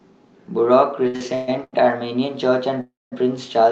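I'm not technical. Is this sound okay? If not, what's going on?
No. From 1.07 to 1.75 s there are repeated stalls (stutter): the speech halts four times, the longest about 0.13 s, as late data ran out. From 2.81 to 3.14 s a call audio freeze stretches the last sound, then 0.2 s of silence, likely from delayed network packets.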